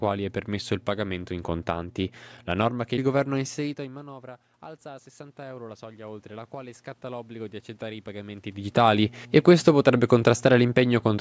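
From 3.77 s, right after "che il governo ha", automatic gain rising kicks in as the talker backs off: gain climbs about 9 dB until 8.74 s, so voice and room noise swell together.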